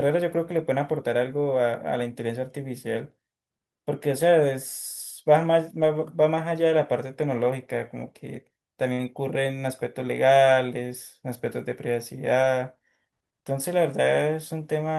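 Speech with two network faults. A lost packet rebuilt from error correction occurred at 5.81 s, 8.97–8.99 s and 12.39–12.45 s. The decoder played low-bitrate backup copies, leaving brief rougher, noisier patches rather than gaps. Short concealed packet loss at 8.93–8.99 s left 40 ms missing, which the receiver filled by extending the preceding sound. It comes through as a brief smear.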